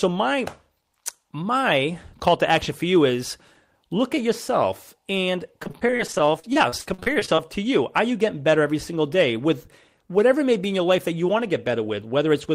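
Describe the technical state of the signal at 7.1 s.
At 7.1 s the speech is inside a run of repeated packet loss (robotic sound) from 5.63 to 7.39 s, between "look at yourself and" and "to you". Roughly two dozen short holes, the longest 43 ms, are patched by extending the last sound, which makes the speech choppy with pieces missing. On a spectrogram this shows as frozen, smeared harmonic blocks, and the waveform looks chopped and repetitive.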